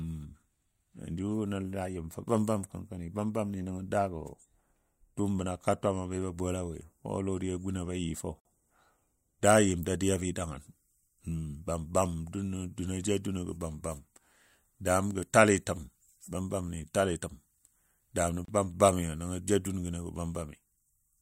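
A speech clip with a gap at a join of encoded pieces twice, 8.40–8.45 s (about 51 ms) and 18.45–18.48 s (31 ms), ten seconds apart. Separately encoded chunks were butted together untrimmed, so encoder delay and end padding leave short silences with smeared edges before the speech resumes mid-flow.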